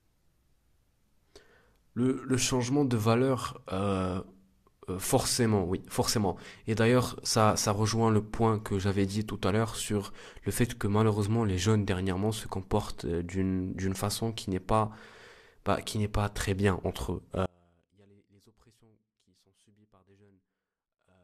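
An audio dropout to a faint residue begins at 17.46 s and lasts to the end of the speech. The signal cuts out abruptly mid-flow rather than pausing or fading, and what remains is only a faint trace of the sound, somewhere around 35 dB below its normal level. The likely cause is the wanted feed being lost while the path after the break stayed live, so a weak leak of the source still gets through.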